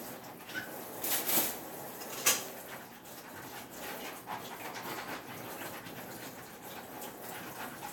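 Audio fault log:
Nothing to flag here, as these sounds come through without any technical trouble worth noting.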